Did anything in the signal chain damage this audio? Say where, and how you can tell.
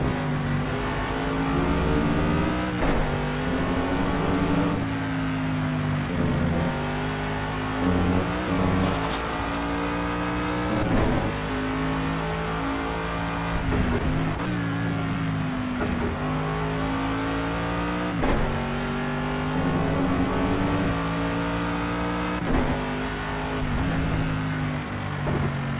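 No, nothing damaged this audio.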